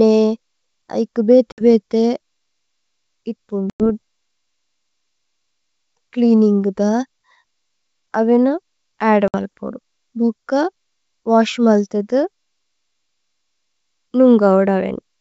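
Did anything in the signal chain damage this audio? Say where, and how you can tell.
Yes: packet loss on an ADPCM call at the network stage leaves silent gaps at 1.52–1.61, 3.70–3.87 and 9.28–9.35 s (about 60, 100 and 60 ms). The decoder's predictor loses sync, so the speech briefly comes back slightly distorted.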